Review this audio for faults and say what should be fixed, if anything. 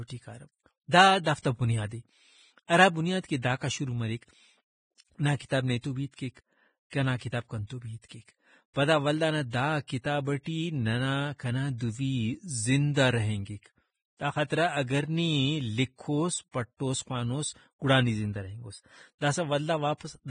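The whole speech track has a hissy, grainy top end, with nothing above 9.7 kHz and fine treble detail that turns to rough noise. That points to heavy Vorbis compression as the likely cause, at a low rate around 20 kbps. The encoder keeps a smooth spectral floor but quantises the treble so coarsely that real detail gets swapped for noise of similar energy. Encode at a higher quality setting and the treble should come back intact.

There's also pre-echo just ahead of sharp onsets at 1.24 s, 1.42 s, 5.37 s and 6.90 s. Each is a short hiss that creeps in 21 to 34 ms before the attack and leaves it sounding smeared. That's quantisation noise spread across the whole transform block, spilling into the quiet gap before the transient. A higher bitrate, or an encoder that switches to short blocks on transients, would keep it out.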